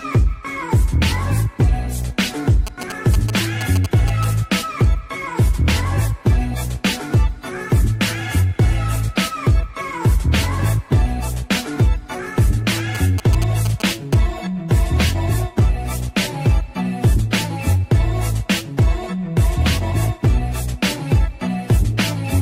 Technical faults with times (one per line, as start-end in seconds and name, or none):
2.67-4.25 GSM signalling bursts
12.95-14.14 GSM signalling bursts